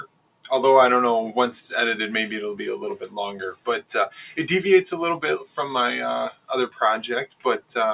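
The level of the sound pumps and flutters throughout, with held and fading parts sinking by around 10 dB while attacks come through, the mark of a noise suppressor applied to music or sounds: a speech-tuned suppressor treats steady tones, ambience and tails as noise and turns them down. There is also sound cut by the noise suppressor at 0.00–0.46 s (drop of about 18 dB), 5.42–5.58 s (about 10 dB), 6.32–6.50 s (about 16 dB) and 7.27–7.70 s (about 18 dB), where the sound sinks sharply or its decay is cut short. The audio has nothing above 4 kHz, which fits a G.711 mu-law call path at 64 kbps.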